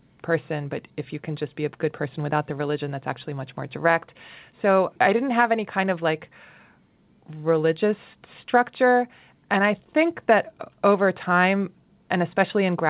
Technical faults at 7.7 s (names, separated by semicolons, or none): none